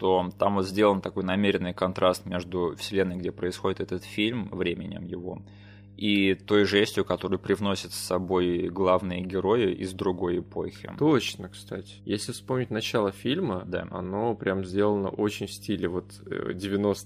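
From start to finish there's a mains hum sitting under the speech, a steady 50 Hz drone with a few low harmonics, roughly 20 dB below the talker. It sounds like a ground loop or a nearby transformer bleeding the power line into the signal chain.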